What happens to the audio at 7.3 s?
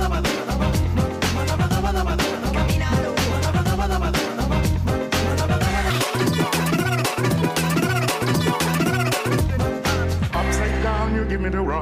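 From 5.90 to 9.41 s, a section at the wrong speed plays 1.88 times too fast, likely from a clock mismatch. Pitch rises about ten semitones while tempo hurries in step, unlike a pure pitch shift.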